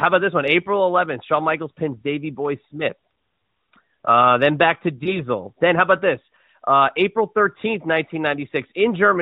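Speech carried over an AMR narrowband mobile link, band-limited to 4 kHz with the light coding texture expected at a 12.2 kbps mode, has a brief disturbance from lost AMR speech frames between 5.04 and 5.21 s. The decoder conceals the gap by repeating the last good pitch and vocal-tract parameters at reduced gain, producing a short dip or warble, which fits a single 20 ms frame dropped by radio errors, before the voice recovers weak or rough for a moment.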